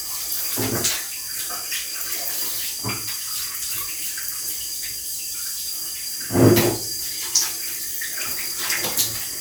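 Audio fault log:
No faults heard anywhere in this recording.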